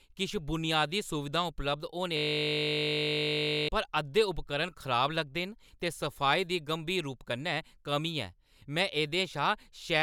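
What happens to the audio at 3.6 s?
At 3.6 s the speech is caught in a system hang loop running from 2.17 to 3.69 s. The machine stalled while the sound hardware kept replaying one 20 ms buffer. That piece repeats 76 times, giving a steady buzz at 50 Hz.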